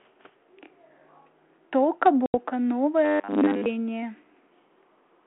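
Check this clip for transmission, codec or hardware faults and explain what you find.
Two faults show up in the speech.

From 2.26 to 2.34 s there's packet loss on an ADPCM call. About 80 ms drops to hard-edged silence, which fits roughly four lost packets. Because G.726 ADPCM at 32 kbit/s only sends differences from a running prediction, the receiver's predictor and step size lose sync with the sender's during the gap. So the speech comes back with some brief distortion before it settles.

From 3.05 to 3.66 s the speech turns rigid and metallic, a steady 100 Hz buzz that still loosely tracks the syllables. That's robotic sound from repeated short buffers, most likely caused by audio arriving too slowly, so the playback side loops its last 10 ms chunk to fill time. A 10 ms loop imposes that fixed 100 Hz pitch, and with most of the real audio skipped, the buzz covers whatever should have been there.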